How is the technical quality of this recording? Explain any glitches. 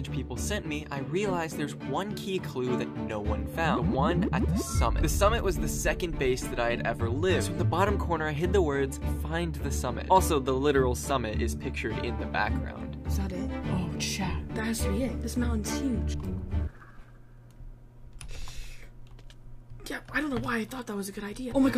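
Nothing stood out on listening to the recording, and there were no glitches to explain.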